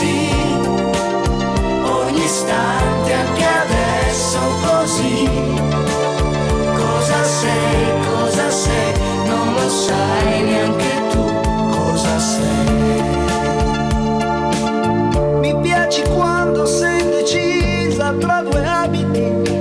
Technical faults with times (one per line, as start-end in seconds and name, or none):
9.89 file header played as audio